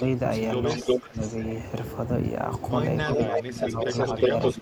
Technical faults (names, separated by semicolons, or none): echo leak; speech suppressed in double talk